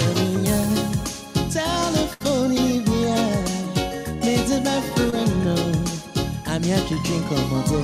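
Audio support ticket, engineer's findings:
Burst of packet loss, 2.13 to 2.22 s: the sound smears into a held, fading tail for about 67 ms, then picks up further along with roughly 60 ms gone. That's the jitter buffer or decoder stretching the last audio over a run of missing packets.

Short concealed packet loss at 5.10 to 5.14 s and 6.94 to 6.98 s: brief smudge or wobble each time, about 20 ms of the stream never arrived, so the decoder extrapolated the previous sound and crossfaded back in. Network drops, not capture.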